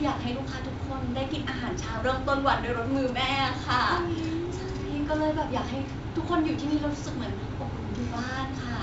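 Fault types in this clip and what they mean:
Wireless microphone noise hit: a 43 ms burst of static at 3.07 to 3.11 s, as the analogue FM link faded and receiver noise rose. On a spectrogram it is a broadband vertical smear; on the waveform, a ragged noisy spike.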